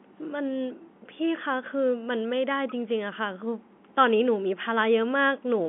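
No technical faults occur at any point in the speech, so there is nothing to describe in time order.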